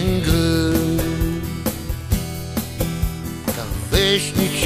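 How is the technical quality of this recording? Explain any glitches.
The technical quality of the recording is sound, with no glitches to explain.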